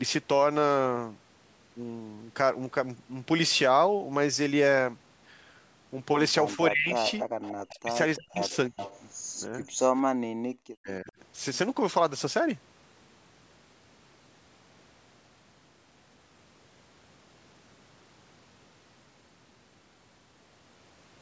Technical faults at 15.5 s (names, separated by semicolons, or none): none